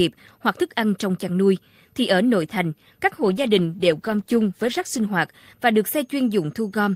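After "ở nội thành các", from 3.2 to 5.15 s, a call bitrate drop leaves the speech coarse and muffled, consistent with coding falling from 48 to 14 kbps.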